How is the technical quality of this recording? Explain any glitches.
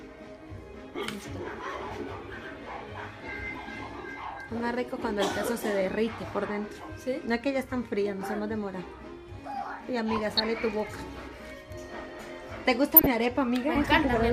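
The recording is marred by three bursts of DAB burbling, at 0.85 to 1.01 s, 10.13 to 10.41 s and 12.94 to 13.13 s. Weak reception let bit errors, around a few tenths of a percent, slip past error correction into the MP2 data. Corrupted samples put short noise blips into individual sub-bands, and corrupted scale factors make sub-bands jump in level for up to a frame, giving burbling over the sound.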